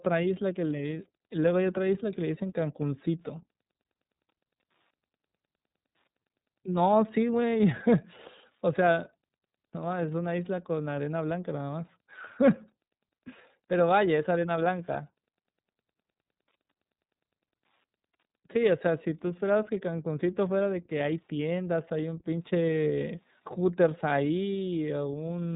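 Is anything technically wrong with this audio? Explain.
Yes. Throughout the speech, the iLBC codec is plainly audible. Each 30 ms frame's excitation is coded on its own, which fits a 13.33 kbps mode, leaving a rough, slightly synthetic edge. A spectrogram shows a hard ceiling near 3.8 kHz with nothing above it.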